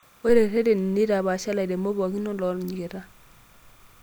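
Timecode bleed runs throughout the speech, from start to finish. Linear timecode running at 30 frames per second has leaked in from an adjacent track or cable, its square wave flipping between tones around 1 and 2 kHz. It sits roughly 35 dB under the speech as a faint, steady chirping warble.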